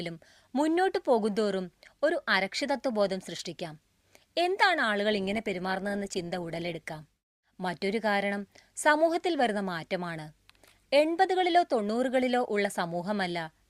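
Speech, with an adaptive stream at a lower bitrate from 5.12 to 7.12 s: codec artefacts abruptly rise, consistent with a step down from 64 to 24 kbit/s Opus. Unlike a dropout or packet loss, there's no gap, just sudden quality switches at both ends.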